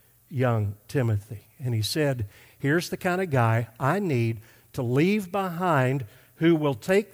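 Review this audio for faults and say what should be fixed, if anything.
No faults found here; nothing needs fixing.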